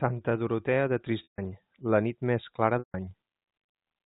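Packet loss with pitch repetition interrupts this speech recording at 1.23 s and again at 2.79 s, each gap lasting 150 ms. To cover each hole, the receiver loops the last pitch period, which briefly sounds like a held, buzzy tone. That tone fades within about 50 ms, leaving silence until the speech cross-fades back in. A 150 ms gap fits roughly five 30 ms packets, carried over G.711 telephone coding, which limits the band to 4 kHz.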